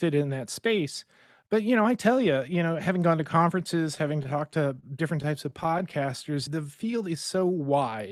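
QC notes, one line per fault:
3.95–4.84 s, repeated stalls (stutter): packets arrived late, so the jitter buffer ran dry seven times. Each stall was bridged by continuing the last sound, 88 ms in all, longest 29 ms, about a tenth of the span. Nothing is lost, but the audio drags and stutters.
5.22–6.10 s, scattered short gaps: roughly seven isolated packets arrived late or went missing, each hole patched by extending the preceding sound, around 70 ms in total, none much beyond 15 ms. No audio is lost, but brief ticks and small smears break the flow.
6.03–7.91 s, jitter buffer slow-down: with its reserve running low or its target delay just raised, the receiver built up a reserve by repeating single pitch periods and slivers of pauses many times over, adding 152 ms. Playback runs at 92% speed with unchanged pitch, so sounds are drawn out.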